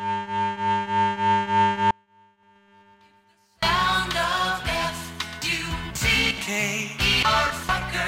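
Music with an audio dropout to a faint residue from 1.91 to 3.62 s: for about 1.7 s the music falls abruptly to a faint leak roughly 35 dB down, likely a brief loss of the feed while the path stayed live. The waveform shows a sudden near-flat stretch, and the spectrogram a dim, hard-edged band.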